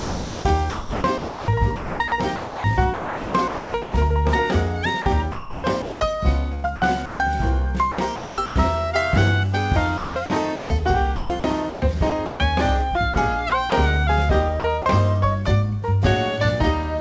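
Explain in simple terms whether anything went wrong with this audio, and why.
The sound turns choppy, with quiet parts replaced by artificial noise, at 0.00–3.94, 5.02–6.00, 6.54–7.20, 7.92–8.56, 9.98–12.40, 13.14–13.72 and 14.60–14.86 s. This is sound chopped by the voice detector. Likely, the sender's detector kept switching transmission off, and filler noise covered the gaps.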